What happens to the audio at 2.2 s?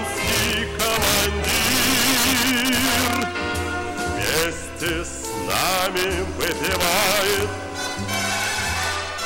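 At 2.2 s the audio is affected by integer overflow, which runs through the whole clip. Peaks driven about 7 dB past the limit wrap to the opposite sign, producing violent cracks on loud moments. On a waveform, peaks jump rail to rail; a spectrogram shows broadband vertical streaks.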